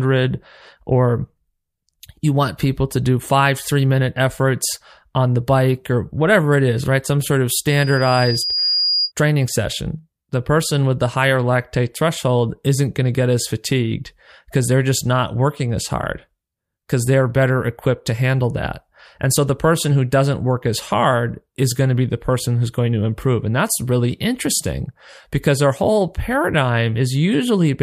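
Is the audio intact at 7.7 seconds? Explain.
No. At 7.7 seconds a loudspeaker feedback squeal begins and runs to 9.12 s: a single tone at 4.9 kHz that swells over about a second until it is roughly as loud as the speech. A microphone is picking up the loudspeaker it feeds, and at that frequency the loop gain tops one, so the tone grows on itself. That gradual swell from nothing sets it apart from a steady interfering whistle, which would appear at full level.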